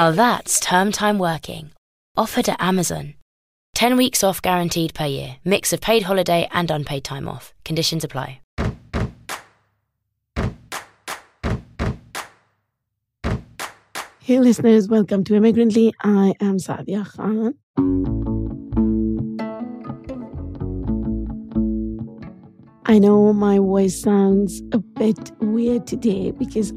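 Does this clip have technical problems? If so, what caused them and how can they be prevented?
No, no technical faults here.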